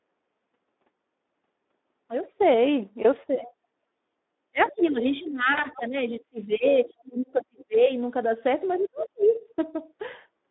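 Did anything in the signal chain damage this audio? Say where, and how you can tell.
Yes. The Speex codec damages the whole clip, audible throughout as a hoarse, noisy texture. This is codec-stage damage: a CELP coder with too few bits to model the excitation replaces fine harmonic detail with coarse pulses and noise. The band runs only from about 250 Hz to 3.7 kHz, and the degree of damage points to a low setting of around 11 kbps. The call microphone processing's bass trimming is normal.

Speech suppressed in double talk occurs at 3.36–3.53 s with a dip of about 20 dB, across roughly 4.5–7.9 s with dips of about 30 dB, and at 8.78–9.36 s with a drop of about 40 dB. This is call processing. The likely cause is an echo canceller that, hearing both sides at once, could not tell the near talker from loudspeaker echo and ducked everything. The result is a weakened, chopped voice.

The other side's voice leaking through appears as faint scraps at 4.62–4.70 s, 4.86–4.90 s and 5.24–5.30 s, about 25 to 30 dB below the main speech. 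It also appears as a longer stretch at 8.74–9.39 s, about 25 dB down. This is also call processing: a second voice from the talker's own loudspeaker was likely left unremoved by the echo canceller and reached the microphone path.

VoIP packet loss concealed by the speech codec occurs at 5.53–5.62 s. About 40 ms of audio went missing at the network stage, which fits two lost 20 ms frames. The decoder filled the gap by extending its last pitch and filter with falling gain. The gap is heard as a brief buzzy tone or coloured noise that fades, and the voice stays thin and distorted for a short while after real audio resumes.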